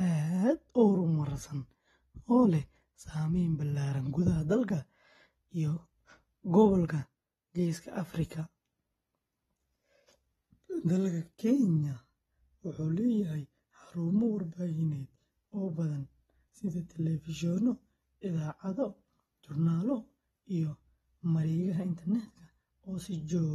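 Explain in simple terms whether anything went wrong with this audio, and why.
Two things went wrong. The whole recording sounds dull and plainly smeared, with a watery, fizzy edge on hiss-like sounds. This is likely AAC compression, squeezed hard enough to throw away fine detail.

At 9.22 seconds there is one sharp click. That is the sign of dropped samples. A tiny sliver of the recording, a fraction of a millisecond, likely went missing, so the sound jumps abruptly instead of flowing smoothly.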